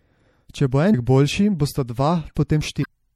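Throughout, the speech sounds plainly watery and swirly, with a dulled top end. This is likely MP3 compression at a low bitrate, consistent with about 64 kbps, where the encoder discards weak high-frequency detail.

A short blip at 0.93 s and a longer disturbance from 2.81 to 2.86 s come from damaged data in the compressed stream. At both points the decoder misreads corrupted frames and briefly loses sync.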